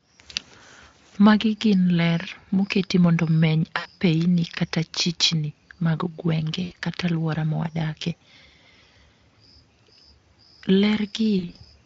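VoIP packet loss concealed by the speech codec occurs at 3.77 to 3.89 s just after "moketi mondo omeny", at 6.63 to 6.73 s just before "kata aluora mawadakie", and at 11.39 to 11.59 s. Each time about 80 ms of audio is missing, and in the last one it is spread in short gaps of up to 40 ms. The decoder stretches the last pitch and filter into a fading buzz or coloured noise, and the speech sounds weak and smeared briefly afterwards.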